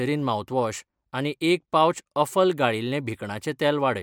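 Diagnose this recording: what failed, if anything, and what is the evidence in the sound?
Nothing in this speech recording points to a failure at any stage of the chain. No stage from capture through to playback leaves audible evidence of a problem, so there is nothing to diagnose.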